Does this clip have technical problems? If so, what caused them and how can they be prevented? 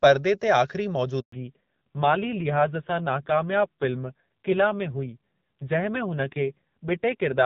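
Yes. There is a handover gap from 1.20 to 1.32 s. The call switched networks, and no speech frames arrived for about 120 ms. The sound fades quickly and goes silent, and that stretch is lost. Keeping the phone on one stable network during calls prevents it.

A fallback to narrowband follows at 1.32 s and lasts to the end. Before it, the HD Voice wideband codec sounds clear. After it, nothing above 4 kHz remains. The sound turns dull and rough, which fits a low-rate narrowband codec. Ensuring both networks support HD Voice prevents this drop.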